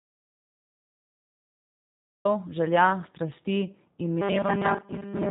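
A speech recording opens in total silence that lasts until 2.25 s, with no room tone at all, which marks it as an audio dropout to silence, likely a lost input writing silence, rather than a quiet pause or gated noise. Once the speech arrives, everything above 3.8 kHz is missing and the sound is rough and synthetic, the signature of the G.729 codec at a rate that fits 8 kbit/s, unlike a simple low-pass filter, which would leave the voice muffled but smooth.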